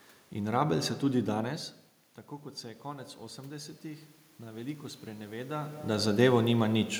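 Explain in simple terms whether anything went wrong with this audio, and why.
Between 2.6 and 6.1 seconds there's automatic gain rising. The input got quieter, so the level control slowly turned itself up, and you can hear the voice and the room noise swell together over those few seconds rather than jumping all at once.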